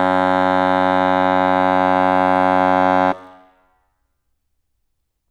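There are no technical faults to describe in time order anywhere in this music.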